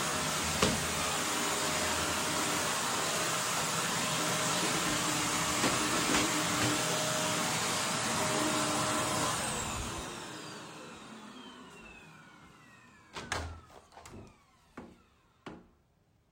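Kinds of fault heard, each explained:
No faults detected on listening.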